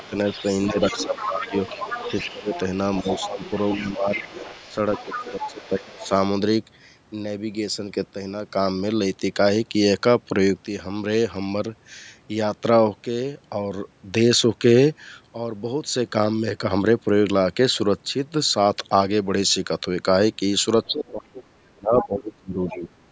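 From the start to 4.25 s the speech repeatedly dips, by as much as roughly 15 dB, for about two seconds in total. This is speech suppressed in double talk. The likely cause is an echo canceller that could not tell the near talker from loudspeaker echo while both sides spoke, so it attenuated everything. Over the same stretch, from 0.01 to 6.09 s, the other side's voice leaks through at around 10 dB below the speech, likely residual loudspeaker echo left in the microphone signal. From 5.13 to 6.11 s a second suppression episode cuts the speech deeper, near 20 dB, for well under a second.

Near the end the pattern returns. From 20.86 s to the end, suppression affects about two seconds of speech and gouges it by roughly 30 dB. Leaked far-end fragments appear within this section: a faint one at 20.86–21.11 s, about 30 dB down; a brief, stronger scrap at 22.0–22.07 s, about 10 dB down; and another at 22.68–22.88 s, about 15 dB down.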